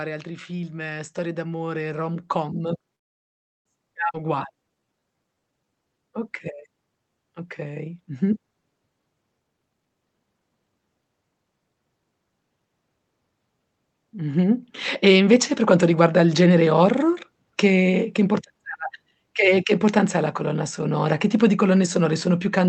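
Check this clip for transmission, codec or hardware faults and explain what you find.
The speech in this clip shows five kinds of call fault across six events. The call path itself comes through as a codec-coded signal with its top cut off at 8 kHz.

Automatic gain rising, 0.24 to 2.79 s and 14.12 to 16.44 s: the automatic gain control judged the input too quiet and raised its gain step by step, by about 6 dB and then about 4 dB. The voice and background swell together. The second rise ends just before "horror che che".

Call audio freeze, 2.95 to 3.67 s: the jitter buffer ran dry, most likely because packets stalled in transit. The receiver fills about 700 ms, nearly all of it silence. When the packets arrive the speech resumes where it stopped, so a delay is inserted and nothing is lost.

Skip ahead, 4.13 to 4.16 s: a stretch of audio was dropped while later audio was already queued. 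Playback jumps forward with almost no gap. Roughly a fifth of a second of speech is missing, and the two sides are butted together.

Jitter buffer slow-down, 4.20 to 5.95 s: with its reserve low, the buffer repeated pitch periods many times, adding 245 ms. The speech plays at 86% speed at unchanged pitch, so the sounds are drawn out.

Jitter buffer speed-up, 9.40 to 11.02 s: holding too much audio, the buffer cut short pitch-period pieces repeatedly, removing around 0.7 s. The speech runs at 144% speed at the same pitch and sounds noticeably hurried.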